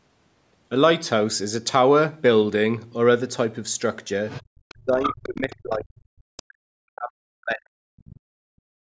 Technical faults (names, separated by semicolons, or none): other side's voice leaking through; speech suppressed in double talk; background gated by the echo canceller